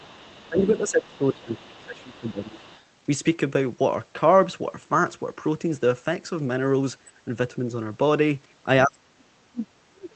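A speech recording that has passed through a call codec, with the band topping out around 8 kHz, carries traces of the other side's voice leaking through at 0.0 to 0.78 s, briefly at 1.13 to 1.18 s, and again at 1.56 to 2.84 s. The leak is faint, roughly 25 to 30 dB under the talker. It is likely residual loudspeaker echo that the echo canceller failed to subtract from the microphone. On a spectrogram it shows as weak, separate harmonic traces sitting beneath the main speech energy and not aligned with its syllables.

Speech is also suppressed in double talk from 0.49 to 2.62 s, overlapping that leak, and again from 8.85 s to the end. In the first stretch the talker dips by up to about 15 dB. In the final stretch the drop is much deeper, around 35 dB, close to cutting out. This is likely the echo canceller, unable to separate near and far speech, attenuating everything. The waveform envelope drops there, and the spectrogram thins.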